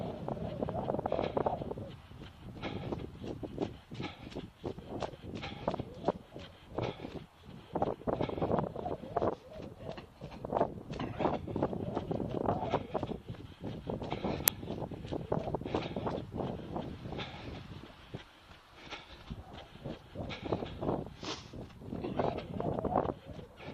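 At 6.46 s and again at 13.48 s, lost LE Audio frames interrupt the sound. Each gap lasts about 10 ms, which points to a single dropped LC3 frame. With nothing received, the decoder fills the gap by reusing the previous frame's spectrum with randomised signs. Over so short a span it never reaches the fade-out stage. Each gap is heard as a brief noisy smear where the tonal detail blurs for an instant.

At 14.48 s an uninitialised buffer is sent to the output before any audio has been written into it, so whatever leftover memory it held is played as sample values. The block lasts 2.67 ms, which fits a 128-sample buffer. It comes through as a sudden, loud, sharp click-like crack that stands out against the surrounding sound.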